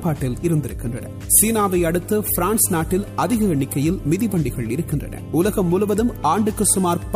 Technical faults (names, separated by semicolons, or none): mains hum